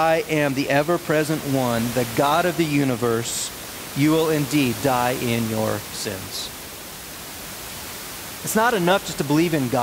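The speech signal shows no technical faults, with only the room's own background noise audible at about 13 dB below the speech.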